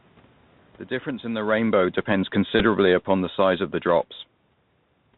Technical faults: Bluetooth CVSD headset codec; automatic gain falling; Bluetooth headset packet repeated

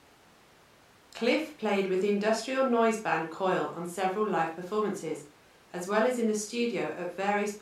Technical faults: none

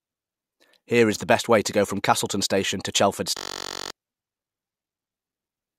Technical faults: system hang loop

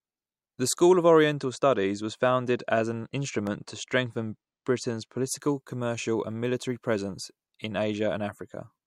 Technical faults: channel delay (comb filtering); CD scratch ticks

